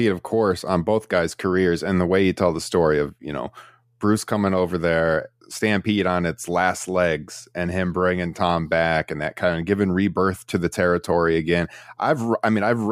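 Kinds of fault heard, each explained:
No technical fault can be heard in the signal, which stays steady in level and continuity throughout.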